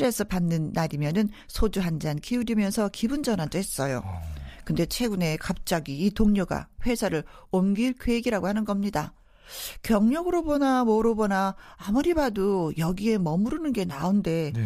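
No technical faults can be heard anywhere in this speech recording.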